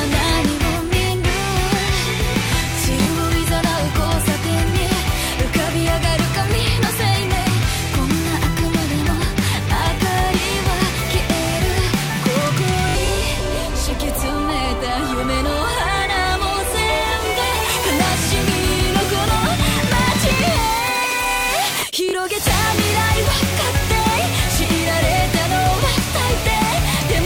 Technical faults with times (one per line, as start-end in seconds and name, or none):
3.02-3.07 Bluetooth stutter
12.89-12.95 Bluetooth stutter
22.09-22.13 Bluetooth stutter